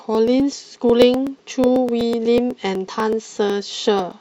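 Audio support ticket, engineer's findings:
Periodic USB or driver dropouts across the speech, 0.15 s to 4.12 s. Regular ticks about every 124 ms, roughly eight per second, about thirty in total, audible only while speech is present. Probable component: USB bus or audio driver stalled by a background task at a fixed interval. Each stall skips about 1 ms of samples; the joined edges click. Waveform: evenly spaced discontinuities. Spectrogram: thin vertical broadband lines at equal spacing.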